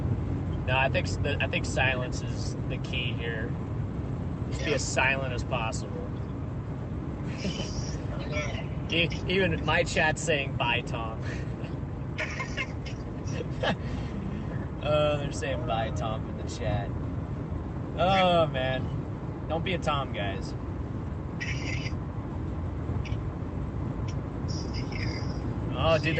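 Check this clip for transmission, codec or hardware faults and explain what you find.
Nothing faulty can be heard anywhere in this clip.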